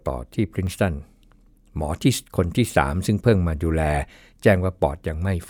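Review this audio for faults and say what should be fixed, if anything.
Two jumps at 0.67 s and 2.7 s are likely a dropped buffer (overrun), where samples were overwritten before being read and the audio joins straight across, skipping about 10 ms and 5 ms. Unlike a dropout, no silent gap appears. Enlarging the capture buffer or raising the recording thread's priority prevents it.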